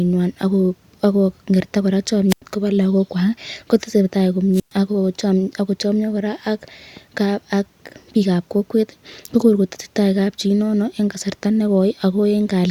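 Twice in this speech, at 2.29 to 2.42 s and again at 4.53 to 4.72 s, you get a wireless microphone squelch dropout. The analogue FM link fades, hiss or static swells briefly, and then the receiver's squelch cuts the output. That leaves a hole of near silence of about 90 ms the first time and about 114 ms the second, before the speech comes back in.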